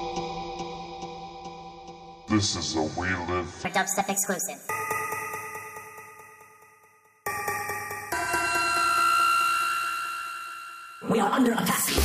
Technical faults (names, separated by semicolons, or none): audio read two samples at a time (double speed)